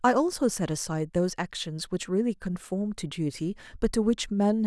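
No technical faults are audible anywhere in this speech recording.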